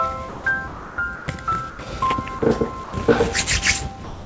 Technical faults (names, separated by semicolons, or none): sound dropped by the voice detector